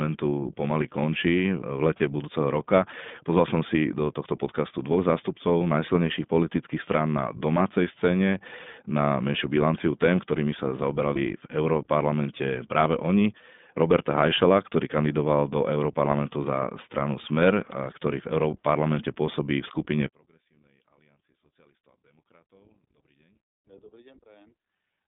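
iLBC codec damage runs through the whole speech clip. The sound sits in a narrow telephone band from about 150 Hz to 3.6 kHz, with nothing above. Each short frame's excitation is coded on its own, and the 20 ms frame rhythm points to iLBC's 15.2 kbps mode. The coding damage is plainly audible: the speech is intelligible but has a rough, slightly synthetic grain.

Lost iLBC frames occur at 0.30 s, from 1.98 to 2.00 s, and from 11.14 to 11.18 s. Each loss is about 20 ms, one frame. For each one the decoder had no data and filled the hole by repeating the last pitch cycle with added noise. This comes out as a brief held, buzzy vowel-like smear. Because iLBC frames stand alone, the speech snaps back to normal right after each gap.

One channel inverted affects the audio from 20.06 s to the end. From that point the speech almost disappears, falling by about 37 dB and leaving only a faint residue. 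The likely cause is that one stereo channel has flipped polarity. When the channels are summed to mono, the centred speech they share cancels, and only the small difference between the two channels remains.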